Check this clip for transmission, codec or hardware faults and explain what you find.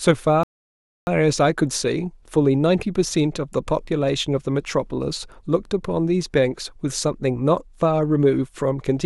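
One fault: a rebuffering stall from 0.43 to 1.07 s. Playback drained its buffer, halted, then resumed without loss, adding 0.64 s of silence, a flat gap across every frequency.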